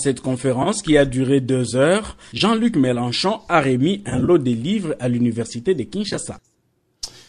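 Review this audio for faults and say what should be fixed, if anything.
AAC frame loss with concealment breaks up the speech at 0.63–0.68 s (about 30 ms lost), 2.38–2.41 s (20 ms), 4.10–4.30 s (90 ms of gaps spread over 180 ms, the longest run roughly 30 ms) and 6.09–6.18 s (50 ms spread over 80 ms). These losses come in steps of about 10 ms, which fits the short frames of the low-delay AAC coder that is likely carrying this audio. When a frame is missing, the decoder rebuilds it from the last good spectrum, so each patch sounds smeared, noisy or phasey instead of silent. On a spectrogram the harmonic lines blur into a grainy, flattened smear across these spans. The waveform shows no hard dropout, only stretches whose envelope looks frozen or slightly ragged. To prevent it, add forward error correction or redundant frames and a larger jitter buffer on the transport so fewer AAC frames arrive too late or not at all.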